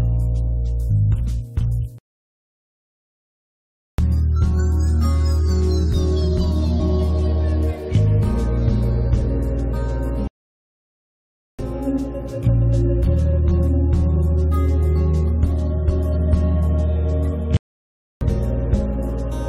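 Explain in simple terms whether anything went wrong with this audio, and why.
Twice, part of the compressed audio data was damaged, so the decoder could not read it properly and had to search for the next readable point. This damaged data in a compressed stream shows up as a brief glitch at 0.89 s and again at 6.79 s.

Three times the sound cuts to silence in mid-flow and then picks up again, from 1.98 to 3.98 s (2 s), from 10.28 to 11.59 s (about 1.3 s), and from 17.57 to 18.21 s (about 0.64 s). This is likely a playback stall, where the player ran out of data or was held up and produced nothing until it recovered.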